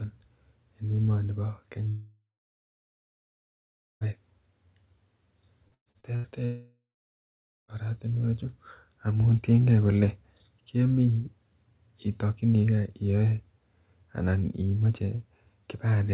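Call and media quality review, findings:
Long network dropout, 1.88 to 4.05 s: audio cuts out for about 2.1 s. Concealment stretches the last sound into a fading buzz, then roughly 1.7 s of dead air. Resumes further on, the gap's content simply gone.

Long network dropout, 6.45 to 7.71 s: same pattern, about 1.2 s lost, fill tails off into roughly 0.8 s of silence. Likely a stall upstream of the jitter buffer, which has nothing left to play.

Repeated packet loss (robotic sound), 5.68 to 6.27 s: choppy patch. Five separate holes, the longest 116 ms, together covering about half the span. Each is papered over by repeating the last audio before the next one hits.

Call path is G.711 mu-law at 64 kbps, hence the hard 4 kHz ceiling under all of this. Packet loss sits right before the second dropout, so the link was likely struggling through there.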